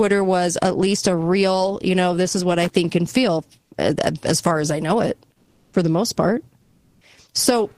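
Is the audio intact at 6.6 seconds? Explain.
No. From 6.61 to 7.01 s, about 400 ms, there's comfort noise in place of the background. The sender likely paused transmission there (Opus DTX), so the receiver filled the gap with steady, featureless synthetic noise, shifting the background level by about 6 dB.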